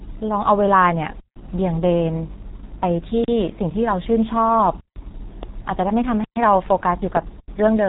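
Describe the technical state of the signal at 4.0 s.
At 4.0 s the G.723.1 codec is at work, as it is across the whole clip. The speech is carried in coarse 30 ms frames at a rate that fits about 6 kbit/s, with nothing passing above 3.8 kHz, so it sounds heavily muffled and hoarse, with smeared consonants.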